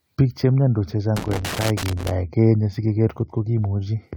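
Right after "che mnyandos", from about 1.17 to 2.11 s, there's a burst of loose connector crackle: a worn or dirty contact keeps making and breaking, chopping the speech into an irregular scratchy rattle.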